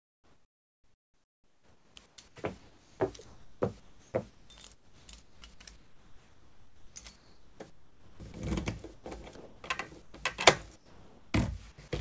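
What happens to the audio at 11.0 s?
At 11.0 s the sound is replaced by steady, featureless noise from 10.76 to 11.34 s. About 0.21 s of real sound is lost. This is likely sound dropped by the voice detector: it judged the sound to be background and stopped sending, and the receiver filled the gap with comfort noise.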